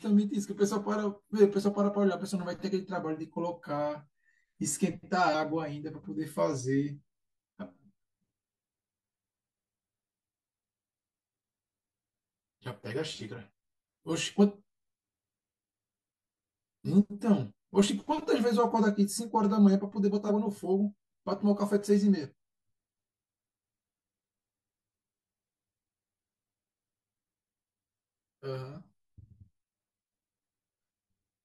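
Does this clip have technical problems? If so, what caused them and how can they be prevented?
Yes, two things. Throughout, there's channel delay (comb filtering): one channel lags the other by roughly 10 ms, and summed to mono the shared speech cancels at evenly spaced notches starting somewhere near 50 Hz, so everything sounds hollow and phasey. Aligning the channels before any mono fold-down prevents it.

Then there's damaged data in a compressed stream at 5.30 to 5.35 s, 7.57 to 7.63 s and 20.25 to 20.30 s. Each is a brief glitch where the decoder hit corrupted frames, lost sync and hunted for the next header. Checksummed transfers and verified files would catch it.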